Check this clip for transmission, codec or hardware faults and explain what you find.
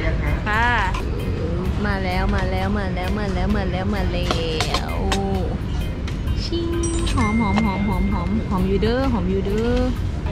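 No transmission, codec or hardware faults turn up anywhere in this clip.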